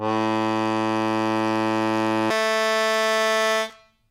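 From 2.3 s to 4.1 s the music lurches to double speed and jumps an octave up: audio read two samples at a time, each pair treated as one frame.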